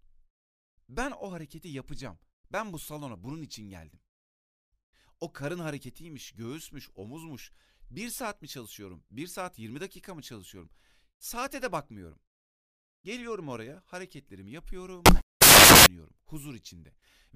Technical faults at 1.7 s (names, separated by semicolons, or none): none